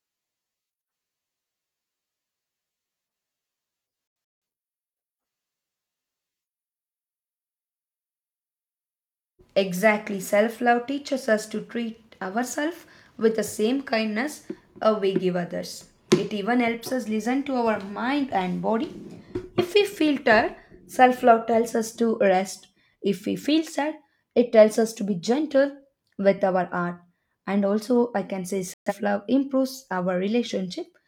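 A speech recording that suffers two digital broadcast dropouts, where the receiver muted on corrupt or missing frames and the programme carried on afterwards. From 4.08 to 4.42 s, about 256 ms of sound vanishes in scattered holes, the longest 171 ms, which fits six frames of roughly 43 ms. At 28.74 to 28.93 s, between "also I can say" and "love improves", a 128 ms gap fits three frames. A waveform shows flat silent stretches, and a spectrogram shows blank vertical bands.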